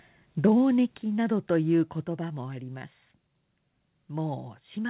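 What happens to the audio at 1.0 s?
At 1.02 s the speech level drops suddenly by about 6 dB, and the background falls with it. The likely cause is a microphone volume stepped down: the call software lowered the input gain in one step. Nothing above 4 kHz is heard, which fits the G.711 call path.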